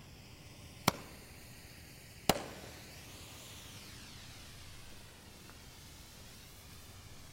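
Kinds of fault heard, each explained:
No technical fault can be heard in the audio, and the signal stays steady and continuous for its whole length.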